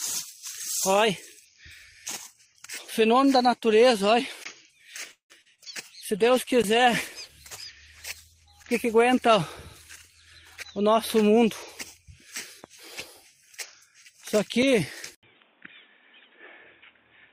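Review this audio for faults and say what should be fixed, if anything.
At 5.11 to 5.32 s there is a call audio freeze: the sound stretches into a fading buzz, then about 120 ms of silence, and resumes where it stopped, now 184 ms later. Late packets likely drained the jitter buffer. On a spectrogram, a smeared band fades to an empty column.

Short concealed packet loss follows at 5.42 s and 5.55 s. About 40 ms and then 20 ms of audio never arrived, so the decoder extended the previous sound and blended back, giving a brief wobble. The waveform shows slightly too-regular stretches there.

From 6.04 to 11.76 s a call bitrate drop takes the stream from 64 to 15 kbps, holding the lowest rate for about 2.4 s. The coarser coding sounds watery and muffled. On a spectrogram the upper frequencies vanish and the rest turns blotchy.

At 15.15 s, after an 80 ms silence, the input switched to a poorer device, likely a headset or alternative microphone. 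Nothing above 3.8 kHz remains, the level falls about 5 dB, and new noise sits roughly 35 dB below the signal. The spectrogram shows a hard ceiling, and the waveform shows a gap and then a smaller envelope.

To prevent these, provision a steadier network path with a deeper adaptive jitter buffer and stop the system from switching the input device during a recording.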